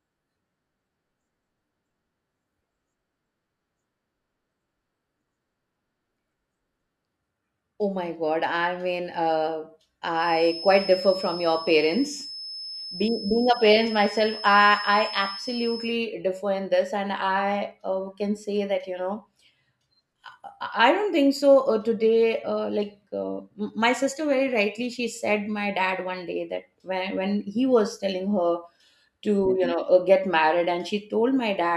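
Feedback whistle from 10.09 to 15.99 s, ending just before "differ in this and": a thin 5.2 kHz tone that swells and fades slowly sits well below the speech, likely from a loudspeaker-to-microphone loop held right at the edge of feedback.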